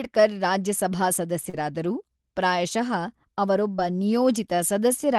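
At 1.49 to 1.55 s and again at 3.77 to 3.80 s, short concealed packet loss drops about 40 ms and then 20 ms of speech. The decoder fills each gap by extending the preceding sound, heard as a brief smear, visible as blurred, flattened harmonics on a spectrogram.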